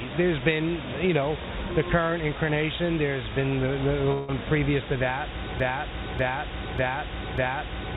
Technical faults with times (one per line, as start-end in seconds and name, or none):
0.00-7.96 low bit depth with dither
4.12-4.31 long network dropout
5.60-7.96 broken-record loop